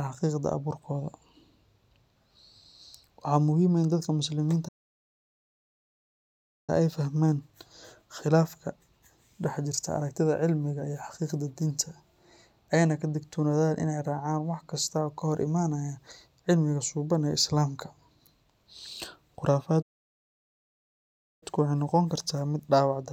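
At 4.68 s the speech cuts off mid-flow into dead silence for 2.0 s, resuming at 6.70 s; the same happens again from 19.82 s to 21.43 s, a gap of about 1.6 s. Both are playback stalls. The likely cause is that the player's buffer ran dry or its output thread was blocked, so nothing reached the output until data flowed again and the speech picked up.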